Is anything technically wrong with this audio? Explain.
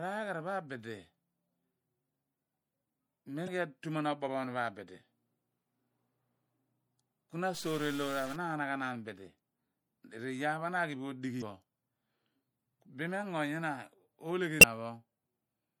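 Yes. The whole speech clip carries MP3 compression artefacts. The encoder appears to have been starved of bits, which fits a low bitrate around 64 kbps, so it likely cut the treble at a fixed point and dropped quiet frequency lines that flicker on and off between frames. The damage is plainly audible: the speech sounds dull and watery with a swirling texture, s sounds turn metallic and chirpy, and consonant attacks lose their sharpness.

Damaged data in the compressed stream shows up three times, at 3.44 to 3.48 s, 11.38 to 11.42 s and 14.59 to 14.64 s. In each spot some of the coded bytes were wrong, so the decoder misread or discarded those frames, lost sync and hunted for the next valid frame header. Each event is a brief chirp, squawk, click or short hole lasting roughly 45 ms, breaking into the speech.

From 7.54 to 8.36 s there is a stuck bit, likely one data bit held fixed at 0 or 1 by a faulty line or converter. 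About half of the sample values come out wrong by that bit's weight, following the shape of the waveform. For that stretch the speech picks up distortion, grainy if the bit is a low one and harsh and buzzy if it is a high one, and because the bit also flips with the sign of small values, the quieter moments fill with noise instead of staying clean.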